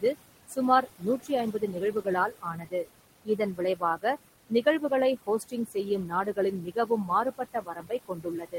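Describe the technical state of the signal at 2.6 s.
At 2.6 s the signal is inside a stretch of speech cut by the noise suppressor, running from 0.48 to 2.86 s. The suppressor has mistaken parts of the speech for background noise and pulled them down along with it, by as much as about 19 dB at the deepest point. Spread across this span, about 0.7 s of speech in all is affected, so soft consonants and word endings come out swallowed or faint.

Around this same moment, noise suppressor artifacts are also present, as they are for the whole clip. The suppressor lowers the bands it judges to be steady noise, frame by frame, by about 20 dB. The room noise, sitting about 14 dB below the speech, therefore sinks in the gaps and comes back up under the speech.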